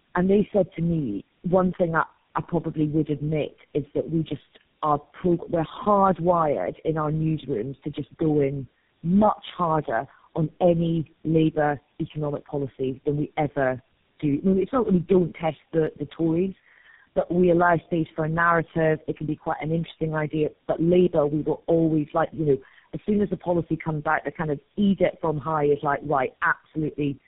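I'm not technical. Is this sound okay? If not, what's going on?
No. The whole recording has a fault called tandem speech coding. The call passed through four phone systems in a row, each squeezing the voice with its own compression, and each one worked on the already damaged output of the one before. That is why the speech sounds rough, muffled and warbly from start to finish, with nothing above about 3.7 kHz. A single poor phone link would sound dull but less rough; these stacked layers add gritty, wobbly distortion.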